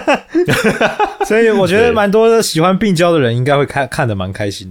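No technical faults can be heard anywhere in this speech recording. There is no moment in it that needs a time stamp or a closer listen.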